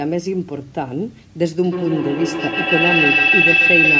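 From 1.64 s to the end, a piercing tone around 3 kHz swells to about 6 dB above the speech, with the loop repeating roughly every 150 ms. This is a feedback howl: two devices on the same call in one room re-amplified each other's output on every trip until the loop ran away.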